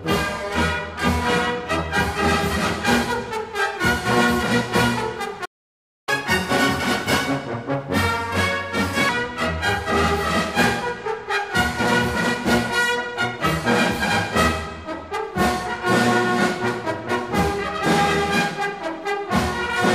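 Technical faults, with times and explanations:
5.45–6.09 s, playback stall: the player likely ran out of data or its thread was blocked, so the sound drops to silence for 0.62 s, then resumes.
6.09–9.09 s, catch-up at higher speed: the player resamples its backlog at 1.15 times normal speed to recover lost time, lifting pitch about two semitones before settling back.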